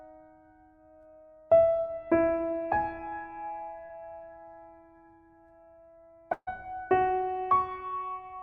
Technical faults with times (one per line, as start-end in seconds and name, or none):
3.85-3.91 short concealed packet loss
6.33-6.49 burst of packet loss